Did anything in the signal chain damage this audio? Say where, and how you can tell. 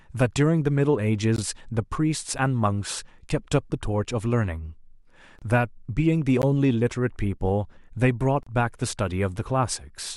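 Yes, at playback: a gap between stream segments. There are hard-edged silent holes at 1.36–1.38 s, 5.39–5.42 s, 6.42 s and 8.43–8.47 s, each 13 to 35 ms, falling on 1 s segment boundaries. The timestamps don't quite meet, so the player fills with silence, but no audio is lost.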